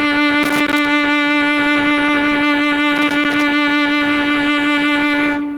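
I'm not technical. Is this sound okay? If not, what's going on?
No. Gain pumping runs through the whole piece: the music's level keeps surging and sinking, most likely because the level was set too high and an automatic limiter keeps pulling it back.

Loose connector crackle appears from 0.43 to 0.85 s and again from 2.96 to 3.43 s. A bad cable contact is breaking the signal, causing bursts of scratchy crackling.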